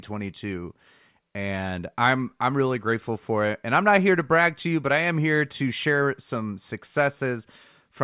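No technical faults are audible.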